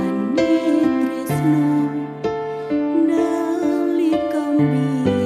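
No technical faults can be heard anywhere in this audio.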